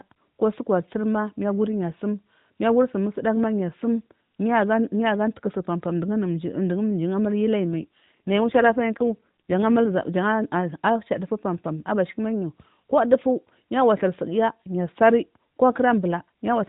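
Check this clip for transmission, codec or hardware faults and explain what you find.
One transmission fault stands out in this speech clip. From 7.64 s to 9.90 s the voice turns rougher, buzzier and more synthetic, then recovers. The bandwidth stays put and nothing drops out. This is an AMR rate drop. The AMR narrowband mobile codec already caps everything at 4 kHz, and here it appears to fall back to a lower mode to free bits for error protection, in a way that fits a step from 12.2 to 5.9 kbps. With fewer bits to model each frame, the voice loses detail and its excitation sounds cruder until the higher rate returns.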